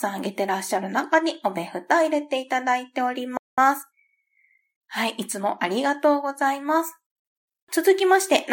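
A speech recording in which playback stalls at 3.37 s, falling silent for about 0.2 s until 3.58 s, likely because the player ran short of buffered data. A time-compressed catch-up follows from 3.58 to 5.62 s: the speech runs about 1.1 times fast while keeping its normal pitch, from spliced, cross-faded fragments, unlike a plain speed-up that would raise the pitch.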